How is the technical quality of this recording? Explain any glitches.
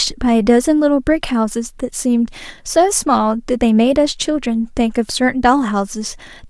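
One fault stands out in this speech recording. At 1.52 s there is an electrical switching spike: a single sharp snap peaking around -15 dBFS, likely from a nearby switch arcing into the line. Unlike a dropout, the speech continues underneath without a gap.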